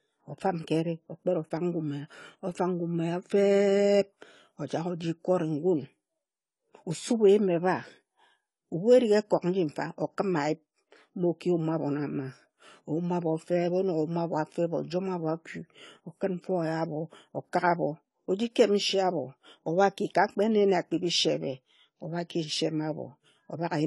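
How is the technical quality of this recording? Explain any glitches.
The recording's quality is compromised by audible compression damage throughout. From start to finish the speech sounds dull and smeared, with nothing above 11.5 kHz and a watery, fizzy edge on sibilants. This is AAC compression, likely AAC-LC at a low bitrate around 32 kbps. To save bits, the encoder cut off the top band and quantised the remaining spectrum coarsely, leaving gaps and noisy patches.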